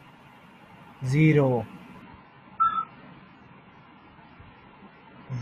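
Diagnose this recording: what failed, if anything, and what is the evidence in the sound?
The failure sits at the network and codec stage: the adaptive stream switched to a lower bitrate. At 2.02 s the speech changes abruptly and stays degraded to the end: nothing remains above 6.8 kHz, and the dull, smeared treble and added codec artefacts fit a drop from roughly 96 to 12 kbit/s AAC. The player fetched a cheaper rendition when throughput fell. Unlike a packet-loss dropout, there is no gap or glitch, only a clean step down in quality.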